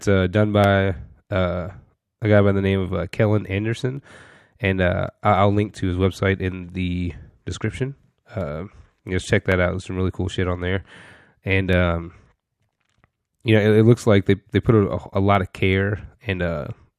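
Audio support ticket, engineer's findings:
Regular clicks in speech every 1.11 s, from 0.64 s after "uh done" to 16.16 s, around fifteen. Likely clock drift buffer slips: unsynced clocks a few hundred ppm apart; buffer drops or repeats a small sample block.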